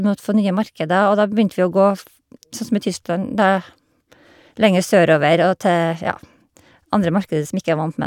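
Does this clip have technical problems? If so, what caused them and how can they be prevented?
No, there are no technical problems in this recording.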